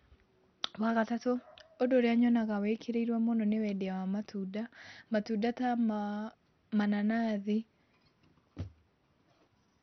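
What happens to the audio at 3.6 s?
At 3.6 s the speech sounds muffled and gurgling, with a grainy, watery distortion that runs through the whole clip rather than starting there. Nothing comes through above about 6.2 kHz. This is likely MP2 compression at a rate starved enough to fit around 48 kbps: the MPEG Layer II encoder runs short of bits across its 32 sub-bands, shuts off the upper ones, and quantises what remains so coarsely that the sound breaks into granular texture.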